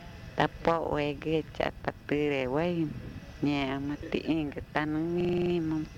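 From 5.2 to 5.5 s, a system hang loop replays one 42.7 ms slice seven times: a 23.4 Hz stutter showing identical waveform blocks and evenly spaced spectrogram stripes.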